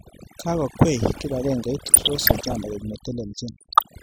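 Overdone noise removal runs through the whole speech clip. The noise reducer was set too hard. It pulls bands near its noise estimate almost to nothing. Quiet parts of the voice vanish with the hiss. The background sits near silent with twinkling specks.

DAB burbling appears from 1.85 to 2.53 s, then again from 3.61 to 3.83 s. Weak reception let bit errors slip past error correction into the MP2 data, about one to two percent at first and around one percent later. Corrupted samples put short blips of noise in single sub-bands, and corrupted scale factors make sub-bands jump in level for up to a frame. The result is short noisy blips across the voice.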